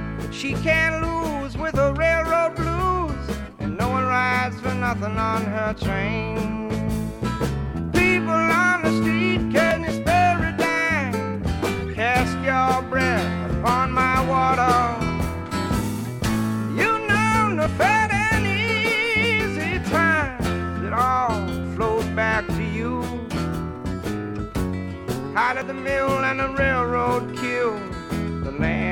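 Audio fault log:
1.76, 5.73, 9.71, 13.69, 17.66, 21.64 and 25.62 s: audio missing between chunks. Brief skips recur every 4 s, each losing around 20 ms with the two sides butted together. This is likely from processing in 4 s chunks. The waveform shows abrupt joins with no silence, and the spectrogram shows thin vertical discontinuities.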